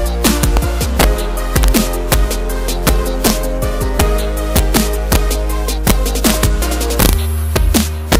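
Integer overflow runs through the whole clip: the gain pushes peaks only about 1 dB past full scale, but instead of being limited they wrap to the opposite sign, so roughly half a percent of samples flip across the range and crack sharply on the loudest moments.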